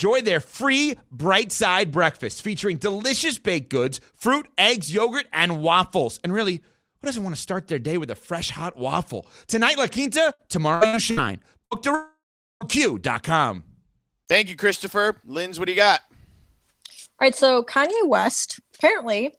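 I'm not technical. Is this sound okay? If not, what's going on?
No. Between 10.33 and 11.20 seconds there is repeated packet loss (robotic sound): pieces of the speech stream went missing four times, the longest about 60 ms. The receiver filled each hole by stretching the last sound, so the speech turns choppy and robotic.

From 11.65 to 11.74 seconds there is a burst of packet loss: about 60 ms of speech never arrived. The receiver held the last sound briefly as a fading buzz or hiss, then the speech picks up again with that piece gone.

From 11.95 to 12.64 seconds there is what is likely a long network dropout, with about 0.66 seconds of speech missing. A fading buzz or hiss briefly fills the start of the gap, then about 0.42 seconds of near silence follows before the speech returns.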